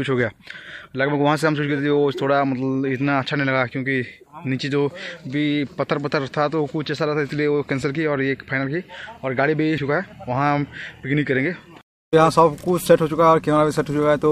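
No technical faults can be heard anywhere in the audio.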